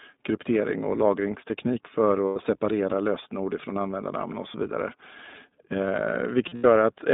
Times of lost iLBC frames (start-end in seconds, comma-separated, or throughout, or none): 2.27-2.37, 6.48-6.66